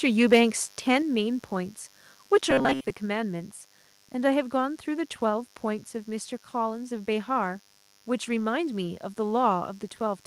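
Speech runs over a mains buzz that lasts the whole clip, sitting about 30 dB below the voice. It is a steady, raspy hum built on 50 Hz, and on a spectrogram it appears as evenly spaced horizontal lines at multiples of 50 Hz climbing into several kHz, the sharp switching spikes from a dimmer, rectifier or poor shielding. From 0.32 to 0.42 s there is microphone overload: peaks exceed the converter's ceiling by about 4 dB, likely from an input level set too high, giving a brief crackly harshness, with flattened tops visible on the waveform and a small fraction of samples cut off at the converter's limit. At 1.02 s the microphone volume steps down by about 4 dB, likely the call software reacting to that clipping by lowering the input gain; voice and background fall together, seen as an abrupt drop in the waveform envelope. Between 2.51 and 2.91 s the voice turns metallic and rigid, robotic sound from repeated short buffers, likely caused by audio arriving too seldom so that most of the stretch is filled with repeats of a snippet roughly 7.5 ms long. 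That repetition imposes a fixed 133 Hz buzz, drawn on the spectrogram as a rigid comb of harmonics ignoring the natural pitch contour.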